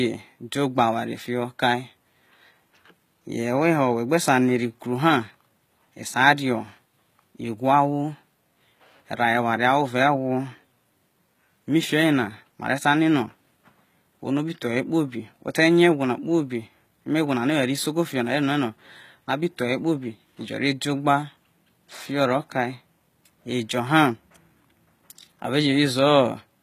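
Throughout, the s sounds turn gritty and metallic under a hard 14.9 kHz ceiling, likely HE-AAC compression at a very low bitrate, around 20 kbps. The treble is rebuilt from copied lower bands, unlike a simple low-pass, which just dulls.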